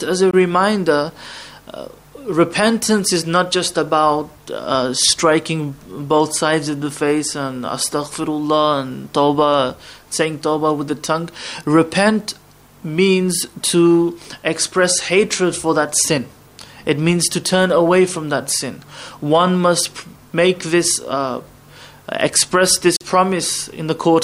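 Two silent gaps cut the audio, at 0.31 s (21 ms) and 22.96 s (43 ms), likely Bluetooth dropouts consistent with one and two lost packets, appearing as blank vertical strips.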